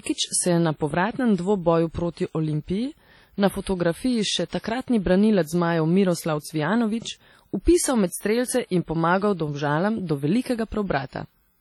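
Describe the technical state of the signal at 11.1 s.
At 11.1 s, as across the whole clip, likely WMA compression at a low bitrate leaves speech ringing and washy, with hiss breathing alongside and nothing above 19.9 kHz.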